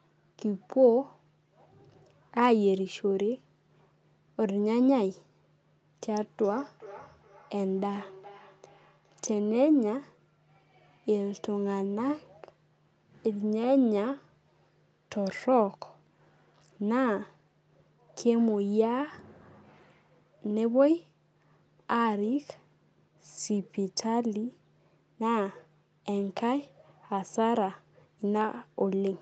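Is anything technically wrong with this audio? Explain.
Yes. Feedback echo between two devices runs from 6.08 to 9.42 s. A second device in the room plays the call back, and the first microphone picks it up again. Its own echo canceller can't remove that sound, so the audio returns roughly every 0.4 seconds, thinner and ringing, peaking about 22 dB below the speech.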